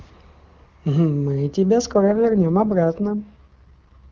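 At 1.93 s an AMR rate drop sets in and lasts to the end, consistent with an AMR wideband link falling from 23.85 to 6.6 kbit/s. Speech turns rough and synthetic, while the spectrogram keeps its band but shows smeared, blurred harmonics with no gap.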